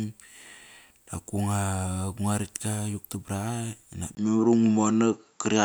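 At 4.15 s there's a brief gap of about 20 ms, and from there to the end the speech sounds duller and a bit boxier, with nothing above about 7.6 kHz. A faint new noise floor sits well below the speech, and the level holds roughly steady. That points to an input switched to a poorer device, likely a different microphone or a headset's call profile taking over partway through the recording.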